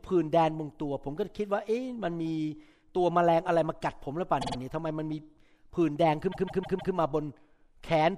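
Repeated frames at 4.40 s and 6.31 s: a 52 ms chunk of speech plays three extra times, then a 157 ms chunk four extra times, stuttering and lengthening the audio.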